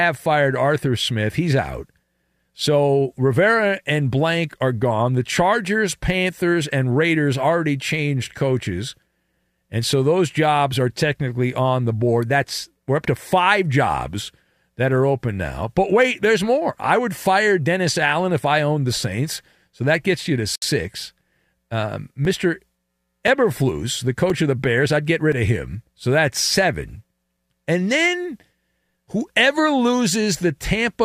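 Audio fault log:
20.56 to 20.62 s, gap at a join of encoded pieces: separately encoded pieces were joined with encoder start-up delay and final-frame padding left in, so a silence of about 67 ms breaks the speech just after "that gets you to", with smeared edges.
22.25 to 28.4 s, periodic USB or driver dropouts: a background task stalls the USB bus or audio driver every 1.024 s, and each stall replaces a few milliseconds of audio with silence, giving around seven evenly spaced ticks heard only while speech is present.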